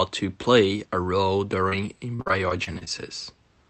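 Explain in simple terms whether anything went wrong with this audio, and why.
Two faults can be heard. Just after "to play a role", from 1.69 to 1.73 s, there is a short concealed packet loss. About 20 ms of audio never arrived. The receiver stretched the last sound to cover it, so you hear a tiny smear.

From 2.16 to 2.88 s there is repeated packet loss, giving a robotic sound. Seven pieces went missing, the longest about 44 ms. Each hole was patched, then another followed. Nearly a quarter of this stretch is filler, so it sounds choppy.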